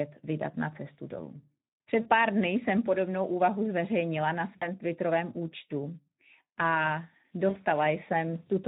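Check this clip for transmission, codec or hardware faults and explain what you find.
Two faults are audible in this speech clip: codec damage throughout and three brief concealed dropouts.

Speex codec, throughout: the CELP coder's sparse excitation leaves speech hoarse and noisy, consistent with roughly 11 kbps. Unlike bandwidth limiting, the damage is a grainy roughness.

VoIP packet loss concealed by the speech codec, at 2.01–2.08 s, 4.58–4.68 s and 7.49–7.62 s: the decoder extends its last pitch and filter, producing a fading buzzy or noisy smear rather than the silent gap of a plain dropout. The lost spans fit about 40, 40 and 60 ms of missing frames.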